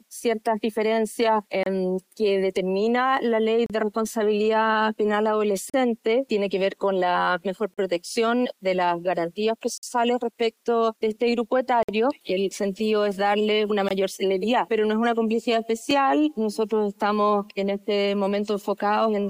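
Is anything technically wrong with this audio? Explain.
Yes. There are gaps between stream segments at 1.63, 3.66, 5.70, 7.74, 9.78, 11.83, 13.89 and 15.91 s. These are hard-edged silences of 4 to 56 ms, recurring every two seconds, which fits 2-second segments whose timestamps leave the player short. No audio is lost.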